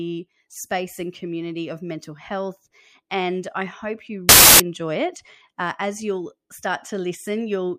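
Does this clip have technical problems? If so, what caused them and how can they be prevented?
Yes. From 4.29 to 4.60 s the speech is replaced by a burst of loud, harsh broadband noise lasting about 0.3 s, the signature of samples built from the wrong bytes. For that stretch the reader assembles each sample with a byte offset, swapped byte order or wrong alignment, so the rapidly varying low-order bits land in the high-order positions and dominate the value. Prevention: enforce the declared endianness and sample alignment when parsing, and validate frame boundaries after any seek or resync.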